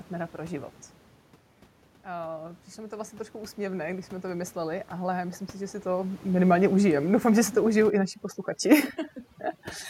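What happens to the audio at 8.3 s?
At 8.3 s the speech is under overdone noise removal, running from 7.9 s, just after "že si to užijou", to the end. The over-strong reduction gates off any band near its noise estimate, so the background drops and breaks up into twinkling specks. A talker moving away would simply get quieter and keep the room noise.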